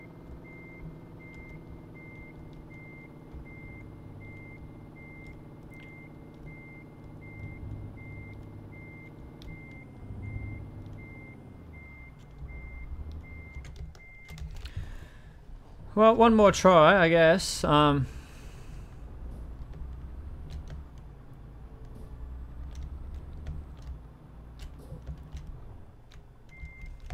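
No technical faults can be heard anywhere in the audio.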